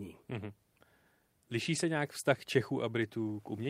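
Lost packet rebuilt from error correction at 1.75 to 1.77 s: one 20 ms packet of this speech never arrived, and the decoder filled it from a low-bitrate copy carried in the next packet. There is no gap, but that brief stretch sounds rougher and noisier.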